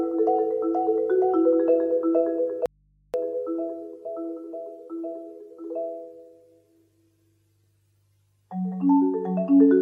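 At 2.66 s the sound suddenly drops out and stays gone until 3.14 s, just under half a second. It's an audio dropout to a faint residue: the gap isn't silent but holds a low mains hum, roughly 40 dB below the normal level. The likely cause is the wanted signal being cut while the chain after the break stayed live, so you're hearing the open input humming. The cut and return are both abrupt, nothing like a pause or fade.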